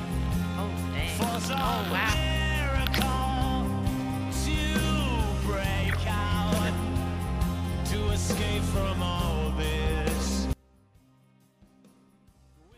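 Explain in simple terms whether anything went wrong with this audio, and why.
Something did go wrong. At 10.53 s the sound suddenly drops away and stays gone until the end. Only a faint trace remains, far quieter than before. This is an audio dropout to a faint residue. The signal was likely lost while the recording path stayed switched on.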